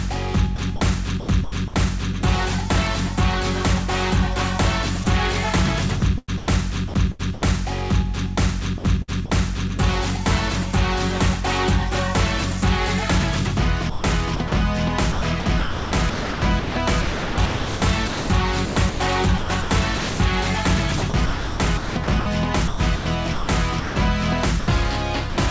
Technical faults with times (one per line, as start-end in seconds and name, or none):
0.56-1.74 sound chopped by the voice detector
5.04-5.06 sound dropped by the voice detector
6.00-7.42 sound chopped by the voice detector
8.78-9.30 sound chopped by the voice detector
13.90-25.38 sound chopped by the voice detector